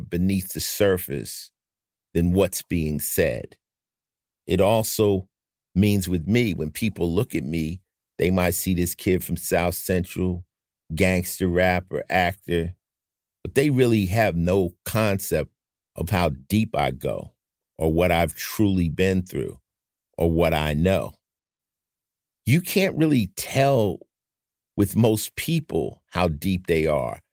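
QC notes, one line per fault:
No faults were found in this speech recording.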